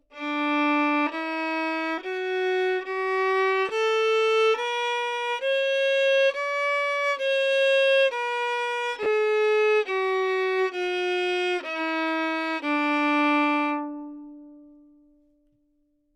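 At 3.69 s the sound briefly turns grainy, a tiny smear of noise where the detail should be. At 9.03 to 9.06 s the same blur returns for about 30 ms. Both are lost LE Audio frames: Bluetooth LE Audio packets failed to arrive, one 10 ms frame first, then three in a row. The LC3 decoder filled each gap by repeating the last good spectrum with randomised phase signs, so the patched frames sound noisy rather than like the original signal.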